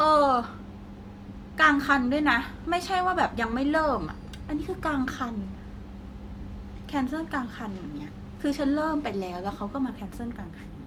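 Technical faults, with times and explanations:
No technical faults, with times and explanations, to report.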